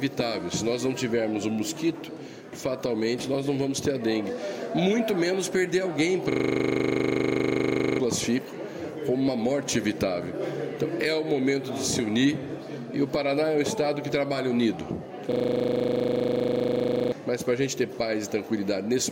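A system hang loop strikes twice, from 6.32 to 8.0 s and again from 15.32 to 17.12 s. Each time the audio freezes on a 40 ms fragment that repeats exactly dozens of times, producing a steady buzz at 25 Hz. This points to the computer or driver stalling while the sound hardware kept replaying the same short ring buffer. Around one and a half to two seconds of real audio is lost in each event.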